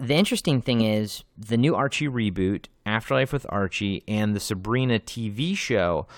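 From the start to 1.94 s, the samples are played back faster than they were captured, with no rate conversion, which fits 44.1 kHz audio running at 48 kHz. This wrong sample rate speeds the speech up about 1.09 times and raises its pitch about 1.5 semitones, so the voice sounds slightly high and hurried.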